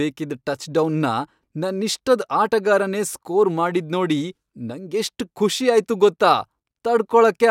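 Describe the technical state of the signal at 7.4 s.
The speech at 7.4 s is intact, with no audible fault at that moment.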